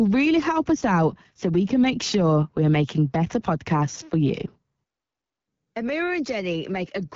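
Speech runs through an AMR wideband (HD Voice) codec from start to finish, with nothing above 7.5 kHz and a plainly audible rough, raspy grain. That coarseness points to one of the two lowest AMR-WB rates, around 8.85 kbit/s, where the pulse-driven vocal tract model has too few bits. Narrowband telephone coding would stop near 3.4 kHz, and a simple low-pass would not add this rasp.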